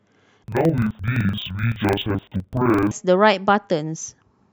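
Speech in this clip is hit by interleaved audio read as planar from 0.44 s to 2.92 s. Each buffer of alternating left and right samples is split in half, so the first half plays as left and the second as right. With blocks about 42.67 ms long, which fits a 2048-sample block, both channels run at half speed and the voice drops an octave, sounding doubled and choppy with a flutter near 23.4 Hz while keeping its normal pace.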